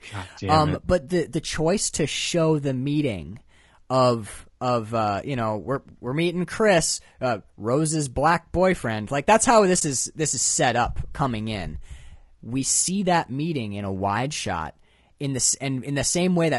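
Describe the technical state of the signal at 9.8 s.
At 9.8 s the sound briefly drops out. From 9.79 to 9.82 s there is an AAC frame loss with muting. The decoder had nothing for that stretch and filled it with silence. The overlapping windows ramp the sound down and back up, so the gap has soft edges. It lasts about 20 ms, which fits one missing frame. It sounds like a tiny hole in the speech.

The speech around it also carries low-delay AAC compression damage. The grain is plainly audible. Voiced sounds come across rough, with noise filling the spaces between harmonics. The top band sounds thin and somewhat synthetic. The likely cause is AAC-ELD, the short-frame codec used in video calls. Its short frames resolve pitch harmonics poorly. The damage points to a low bitrate, around 32 kbps.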